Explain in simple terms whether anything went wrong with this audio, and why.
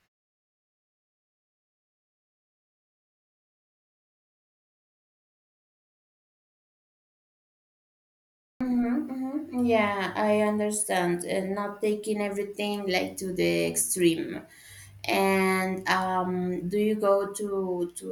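At 8.56 s the sound begins abruptly, its first 45 ms missing. This is a clipped start after a pause: the output device was slow to wake from sleep.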